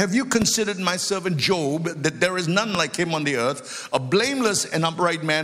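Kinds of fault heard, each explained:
Loud pop: Two sharp, single pops jump out well above the audio, one from 0.42 to 0.44 s and another from 2.75 to 2.77 s, each lasting only a couple of hundredths of a second while the sound carries on underneath without a break. What you're hearing is a sudden voltage step or pulse riding on the signal, likely from a plug, switch, static discharge or a driver glitch, shaped into a short, hard transient by the circuitry after it.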